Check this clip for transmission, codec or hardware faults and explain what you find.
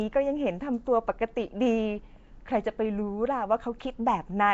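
One fault runs through the whole recording: a rough, hissy halo around the speech, a smeared, underwater quality, and nothing above 7.7 kHz. The damage is plainly audible and points to Nellymoser compression, likely from the old Flash microphone codec. It codes short blocks at a fixed, low bit depth, so weak bands get no bits and are filled with noise. That produces the hiss and blur, and the loss of detail fits a rate around 32 kbps.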